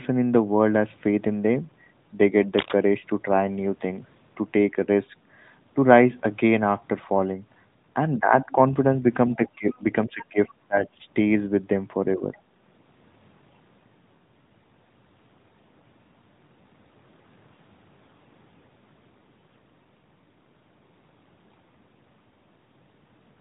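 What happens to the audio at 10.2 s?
Around 10.2 s the talker's voice is caught in speech suppressed in double talk, which runs from 9.36 to 10.48 s. It dips in pieces, roughly 15 dB at its deepest, adding up to about half a second of loss. The likely cause is an echo canceller that turned everything down while both sides spoke at once, unable to tell the talker from its loudspeaker echo. On a waveform the envelope shows ragged notches. On a spectrogram the harmonics fade and break up across that stretch.

At 10.22 to 10.26 s the other side's voice leaking through adds a faint scrap underneath, about 20 dB below the talker. It most likely comes from loudspeaker sound the echo canceller failed to remove from the microphone. It is heard as a brief intrusion lasting only 40 ms. A spectrogram would show a short, weak patch of unrelated harmonic structure within that stretch. The waveform barely changes, and the band stays capped near 3.8 kHz by the narrowband mobile codec.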